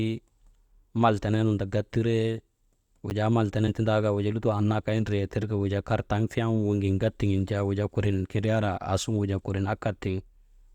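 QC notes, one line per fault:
3.1 s, block of digital silence: a 10 ms stretch drops straight to zero and back with no fade, so it comes across as a sharp tick.
3.67 to 3.71 s, compressed frames skipped: roughly three 20 ms frames go missing, so the speech jumps ahead about 70 ms.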